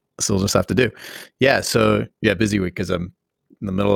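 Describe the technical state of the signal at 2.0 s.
At 2.0 s, as throughout the clip, overlap-add ripple makes the speech flutter about 6 dB around 40 times a second, as mismatched frame overlaps fail to sum evenly. Unlike dropouts, it never falls silent.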